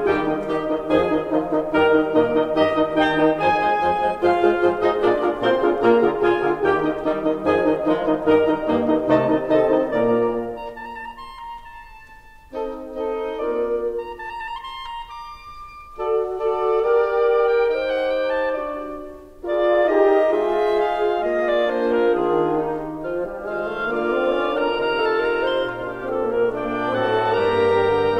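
No technical faults can be heard anywhere in this music recording. The sound runs without any break, dropout or disturbance.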